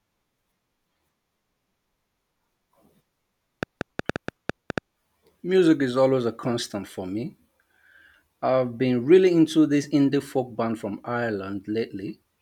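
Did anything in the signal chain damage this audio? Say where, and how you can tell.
Yes. A train of clicks runs from 3.63 to 4.79 s: roughly ten similar pulses at about 7 per second, unevenly spaced and about 15 dB above the speech. The uneven spacing suggests likely interference in the analogue wiring rather than regular buffer underruns.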